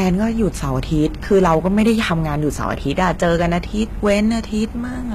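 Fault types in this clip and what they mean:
HE-AAC compression: The whole speech clip sounds like it was likely squeezed through HE-AAC at a low rate, something in the 20 kbps region. Only the lower band is really coded, and the top end is rebuilt by copying lower content upward. So the treble sounds synthetic, with s sounds coming out gritty and lispy. Nothing reaches past about 14.9 kHz, and the coding damage is easy to hear throughout.
hard clipping: In three stretches the speech peaks go past what the signal path can carry and get sliced flat. The flattened tops spray extra harmonics high up, so the loud parts turn harsh and crackly. The worst is from 1.32 to 2.13 s, pushed about 6 dB over. A milder patch runs from 2.99 to 3.57 s, about 3 dB over. A short burst from 4.06 to 4.20 s is about 5 dB over.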